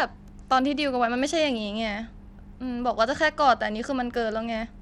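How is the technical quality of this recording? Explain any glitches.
Technical quality is poor, with plainly audible codec damage across the whole speech recording. Throughout, it shows the signature of Bluetooth SBC compression, likely from a low bit pool consistent with about 96 kbps: starved upper sub-bands make the treble thin and flicker, and coarse quantisation adds gritty noise and aliasing to the speech.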